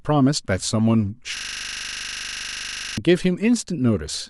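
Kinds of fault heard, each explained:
System hang loop: the computer or its audio driver stalled while the sound hardware kept replaying the same 40 ms stretch of its ring buffer, which fits a buffer of about that length. From 1.37 s to 2.98 s the speech stops moving forward and one identical fragment repeats around forty times at 25 per second. This produces a rapid, rough stutter that borders on a low buzz before normal playback resumes.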